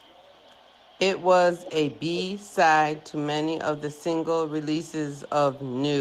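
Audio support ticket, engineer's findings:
Echo leak, 1.64–1.72 s: faint speech copy 0.37 s late, well below the direct level. Discrete repeat, not a smooth reverb tail. Likely far-end loudspeaker echo canceller residue.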